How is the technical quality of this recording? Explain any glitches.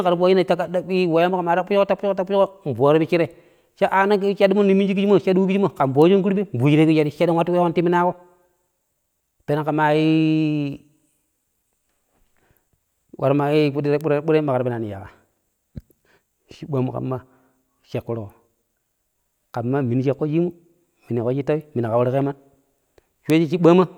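Three isolated ticks stand out in the speech, at 6.02 s, 14.01 s and 23.30 s. Each is a bit error spike: a single flipped bit makes a sample value jump by a power of two and then snap back. The jumps reach about -18, -12 and -6 dBFS, so the last tick is loudest. Each is so brief that it sounds like one or a few samples. That makes a sharp, broadband click that has nothing to do with the speech around it.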